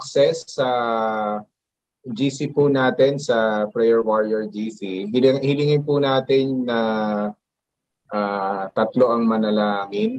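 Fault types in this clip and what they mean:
Nothing in the audio stood out as a fault on listening, with the call path's codec band limit sitting around 12 kHz as expected for that connection.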